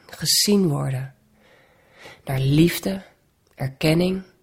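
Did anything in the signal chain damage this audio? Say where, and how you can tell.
Yes. An adaptive stream dropping to a lower bitrate takes over at 1.55 s and lasts to the end of the clip. This happens at the network and codec stage. At that moment the speech takes on more codec smearing. The change is abrupt and leaves no gap, which points to the player switching from about a 64 kbit/s Opus stream to roughly 24 kbit/s.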